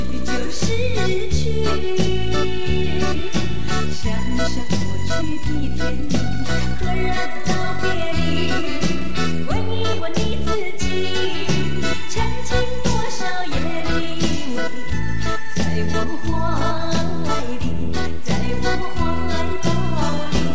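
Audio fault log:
4.78 to 4.83 s, short stall from a late packet: a packet came late, the jitter buffer ran dry, and the receiver filled the gap by stretching the preceding sound for about 30 ms. Nothing is lost. The stream resumes from the same point and the delay grows by 30 ms, so one sound is held slightly too long. On a spectrogram the harmonics run flat and smeared for that short stretch. The waveform repeats near-identical cycles there.
10.0 to 10.47 s, jitter buffer speed-up: the buffer was holding more audio than its target, so the receiver removed short pitch-period pieces many times in a row, taking out roughly 50 ms in total. Over this half second the playback runs at about 110 percent speed with the pitch unchanged, and it sounds a little hurried. The waveform shows slightly compressed, seamlessly joined cycles. The spectrogram shows events packed closer in time at unchanged frequencies.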